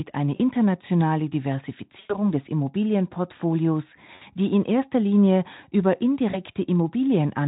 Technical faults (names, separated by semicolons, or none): VoIP packet loss concealed by the speech codec